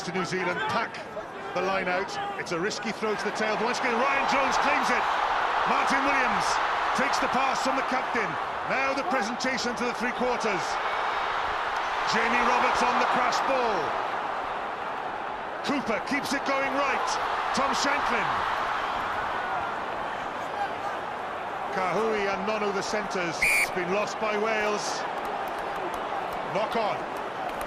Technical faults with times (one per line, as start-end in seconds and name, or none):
none